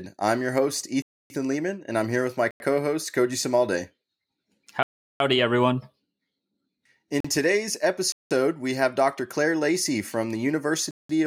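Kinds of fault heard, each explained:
Block of digital silence: the speech cuts abruptly to silence six times, for 41 to 372 ms, likely where whole output blocks went unfilled. Most gaps fit multiples of a 4096-sample buffer. The edges are abrupt, and the longer gaps leave clear holes.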